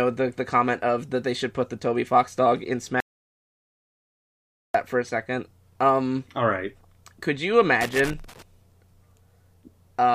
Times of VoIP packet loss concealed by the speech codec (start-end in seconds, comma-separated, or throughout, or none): none